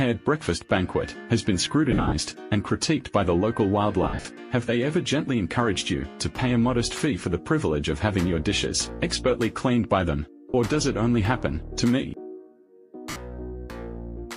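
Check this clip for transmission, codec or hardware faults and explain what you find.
There are four bursts of lost LE Audio frames. Around 1.92–2.12 s about 160 ms drops out in patches across 200 ms, with the longest gap around 70 ms. At 4.03–4.25 s about 170 ms goes missing over 220 ms, the longest gap around 50 ms. Shorter holes follow at 10.50–10.55 s (40 ms) and 13.10–13.16 s (60 ms), which fits 10 ms frames. For each missing frame the LC3 decoder replays the last spectrum with scrambled signs, fading it after the first few frames, so tonal content turns into a brief noisy smear. The light codec coding underneath isn't what breaks up.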